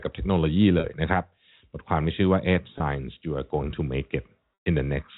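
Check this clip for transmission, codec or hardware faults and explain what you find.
Three dropouts are bridged by packet loss with pitch repetition. At 0.80 to 0.84 s and 2.78 to 2.80 s, the speech briefly holds on a slightly buzzy, frozen tone. At 4.54 to 4.66 s, a 120 ms gap fades into silence before the speech returns through a short cross-fade. The receiver loops the last pitch period to fill the missing audio, which fits 20 ms packets, and fades the loop out during longer losses. The telephone band of the G.711 path is audible throughout.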